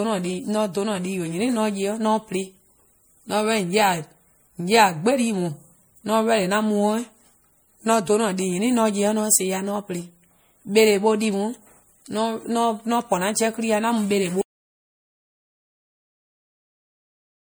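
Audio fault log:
throughout, generation loss: The speech has a swirly, hollow quality with smeared consonant onsets, more degraded than a single lossy encode would explain. This points to repeated decoding and re-encoding, likely through an MP3 chain at around 64 kbit/s, passed about three times. Each pass quantises the signal again on a shifted frame grid, so quantisation noise and missing spectral bands stack up rather than staying fixed, and transients lose their sharpness.
14.42 s to the end, audio dropout to silence: The speech stops abruptly at 14.42 s and the rest of the clip is dead silence, with no room tone or noise floor underneath. That total absence of background means the signal reaching the recorder was lost while writing continued with silence, likely from a disconnected input, a broken link or an accidental mute. Whatever followed in that stretch is unrecoverable.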